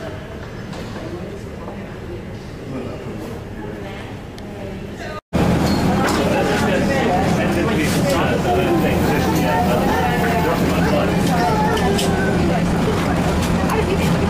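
From 12.42 s to the end, the sound suddenly rushes ahead at about 1.58 times its earlier pace, yet its pitch holds steady. That marks a time-stretched section, likely from software dropping short slices to shorten it, rather than a plain speed-up, which would raise pitch.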